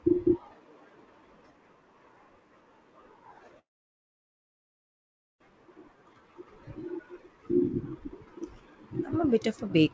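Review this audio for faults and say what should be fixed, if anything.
Packets were likely held up in transit, leaving the jitter buffer empty and causing a call audio freeze from 3.59 to 5.43 s. The speech stops for about 1.8 s, nearly all of it silence. It then resumes exactly where it left off, so nothing is lost and only a gap is inserted.

Shortly after, the receiver was rebuilding its depleted reserve, producing a jitter buffer slow-down from 5.97 to 6.45 s. It repeated single pitch periods or bits of pauses, adding 66 ms to that half-second. Speech there runs at 88% speed with unchanged pitch and drawn-out sounds.

Both faults stem from uneven packet delivery, so prioritising call traffic on the network and giving the jitter buffer a somewhat deeper starting target would prevent them.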